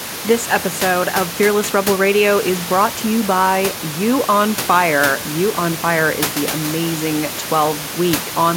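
No technical faults are audible anywhere in the audio.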